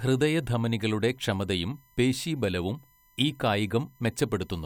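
Throughout the speech runs USB whine. Current drawn by the bus in 1 ms frames leaks into the audio path through power or ground, producing a fixed-pitch tone at 1 kHz and its multiples, loudest at 12 kHz, roughly 40 dB below the speech. On a spectrogram it appears as thin, unbroken horizontal lines.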